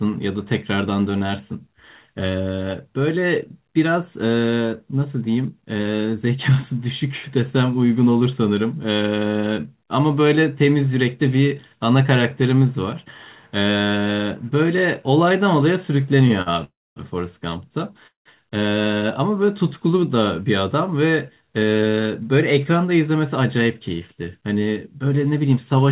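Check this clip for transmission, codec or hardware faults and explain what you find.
Several network faults cluster between 16 and 22 seconds in this speech, carried over a call path whose band stops at 4 kHz, which fits a 64 kbps G.711 A-law codec.

Short stall from a late packet, at 16.28 to 16.33 s and 16.42 to 16.49 s: the jitter buffer ran dry, so the last sound was stretched by 16 and 44 ms. This shows as smeared, repeated waveform cycles.

Call audio freeze, at 16.64 to 16.99 s and 18.07 to 18.28 s: the likely cause is packets held up in transit, so the last sound decays into a buzz and then near-silence. The spectrogram shows blank columns about 230 and 130 ms wide.

Jitter buffer speed-up, from 20.15 to 21.99 s: short pitch-period slices were cut, about 150 ms in total, so speech runs at 108% speed at unchanged pitch. The harmonics stay level while syllables crowd closer.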